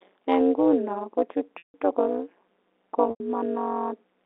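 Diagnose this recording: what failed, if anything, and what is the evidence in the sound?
Overlap-add ripple runs through the whole speech clip, originating in a frame-based call-processing stage. The level pulses at roughly 200 Hz, once per frame, with modulation depth of about 60 dB. The result is a metallic buzz with extra tones around each note. The frames are being windowed and recombined with an overlap whose window sum is not constant, so gain dips sharply between frame centres instead of staying flat.

Packet loss with pitch repetition appears twice, a network fault concealed at the receiver. The first loss, 1.58 to 1.74 s, follows "nguno ko" and lasts 160 ms, which fits eight 20 ms packets. The second, 3.10 to 3.20 s, lasts 100 ms, consistent with five. In each gap the last pitch period is looped, giving a brief buzzy sustain that fades to silence within about 50 ms. Speech then returns through a short cross-fade.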